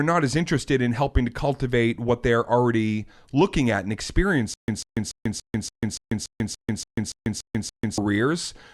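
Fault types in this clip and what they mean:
Stutter with silent gaps: from 4.54 to 7.98 s the same 144 ms fragment of speech repeats 12 times, each followed by about 142 ms of digital silence, a 287 ms cycle, likely a stalled stream replaying its last buffer. Waveform shows identical bursts between silent gaps; spectrogram shows repeated blocks separated by empty columns.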